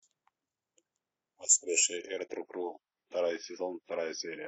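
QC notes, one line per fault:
1.97–4.48 s, adaptive stream at a lower bitrate: quality drops abruptly at 1.97 s with no gap. Nothing remains above 6 kHz and codec artefacts thicken until the end, consistent with a slowed connection forcing a switch from roughly 96 to 24 kbit/s AAC.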